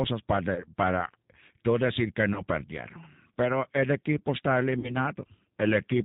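Throughout, the G.729 codec at 8 kbit/s cuts everything above 4 kHz and gives the speech a rough, synthetic grain, which sets it apart from clean band-limiting.

VoIP packet loss concealed by the speech codec occurs at 0.55–0.65 s just before "para tú decir que", at 2.34–2.43 s right after "para tú decir que" (about 20 ms lost each), and at 4.79–4.95 s after "el equipo está" (about 40 ms lost). Each time, the decoder stretches the last sound into a fading buzzy tone or coloured noise rather than leaving a silent gap, and the speech stays weak or distorted briefly afterwards.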